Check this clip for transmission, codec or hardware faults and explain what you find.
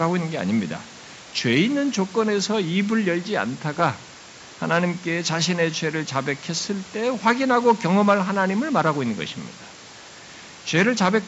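No transmission, codec or hardware faults can be heard in the speech. What is audible is the call's microphone processing, which leaves nothing above 8 kHz, and a room noise sitting about 24 dB below the speech.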